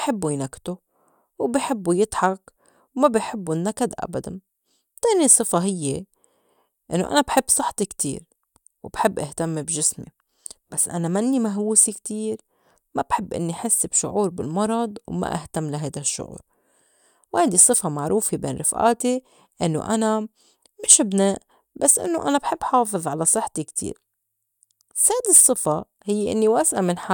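Speech recording, no technical faults found.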